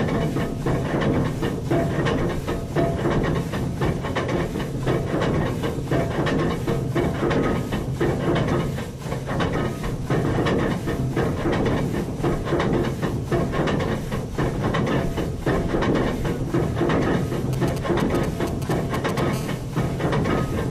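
From 17.53 to 19.2 s, GSM signalling bursts break in: a galloping dit-dit-dit of ticks and brief buzzes at about 217 Hz, roughly 10 dB below the sound. A nearby 2G handset is exchanging short control transmissions, and the audio circuitry demodulates those radio pulses. On a spectrogram it shows as clustered vertical stripes with a comb of harmonics spaced 217 Hz apart. The waveform shows spiky pulse groups separated by gaps.

From 19.33 to 20.5 s a continuous GSM phone buzz follows, a hard, raspy 217 Hz drone about 21 dB under the sound that bears no relation to it. Here the handset is in a call, so it transmits a burst every 4.6 ms without pause and the rectified envelope becomes a steady tone. A spectrogram shows unbroken horizontal lines at 217 Hz and its many multiples reaching well up the frequency range. The waveform shows an evenly repeating sharp-edged pulse train.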